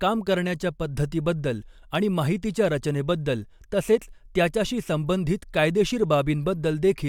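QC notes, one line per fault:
No faults were found in the speech. Nothing in the audio calls for a note.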